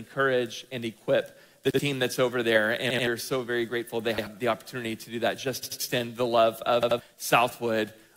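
Repeated buffer stutters occur at 1.71, 2.90, 4.18, 5.63 and 6.83 s. Audio arrived late, so the last 85 ms block, which fits a 4096-sample buffer, replayed once or twice with hard joins. Unlike a dropout, nothing goes silent; an identical chunk recurs.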